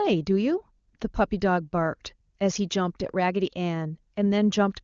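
Speech carried over the AMR wideband (HD Voice) codec at 23.85 kbit/s, its highest rate, with no technical faults to report.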